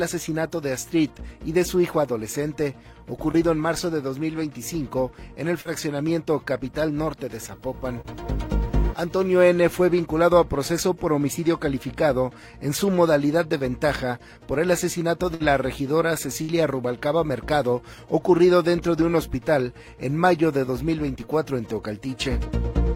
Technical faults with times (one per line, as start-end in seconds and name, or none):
3.31-3.35 short concealed packet loss
5.61-5.67 short concealed packet loss
7.35-9.42 video or display buzz
8.01-8.14 short concealed packet loss
13.59-13.62 short concealed packet loss
15.34-15.42 burst of packet loss
16.42-16.50 burst of packet loss